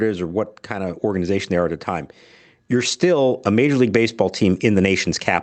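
From 2.7 s to the end of the clip, the level climbs steadily in an automatic gain rising fault. The gain control judged the incoming speech too quiet and kept pushing its gain up over more than two seconds. Because the boost applies to the whole signal, the voice and the room noise behind it swell together, so the background grows along with the talker. The speech is carried over a call codec limited to about 8 kHz, which adds its usual coding noise.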